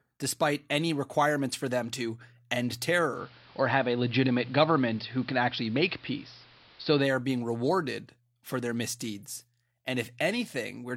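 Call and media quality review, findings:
Digital radio blending to analogue, 3.09 to 7.13 s, after "for them to end" until "being rewarded for their". Receiver lost the digital stream and cross-faded over about 141 ms to the AM simulcast. Audio band-limited, level shift about 3 dB, hiss around 30 dB under the speech. Returns to digital at 7.13 s.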